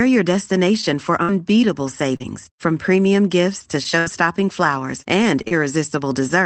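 From 0.81 to 2.22 s, just before "from premium gifts to", there are scattered short gaps. About three packets went missing, the longest around 50 ms, and each hole was bridged by stretching the preceding sound. The result is brief ticks and smears. A spectrogram shows short smeared harmonic stretches, and the waveform shows small repeated-looking patches.

Between 3.84 and 5.53 s, after "from premium gifts to", repeated packet loss gives the sound a robotic quality. Five gaps, the longest 74 ms, were concealed with 147 ms of filler, about 9% of that span. This makes the sound choppy, with pieces missing. The spectrogram shows several frozen, blurred harmonic bands, and the waveform shows chopped envelopes. Across both stretches, the call path's Opus coding limits the spectrum to about 8 kHz.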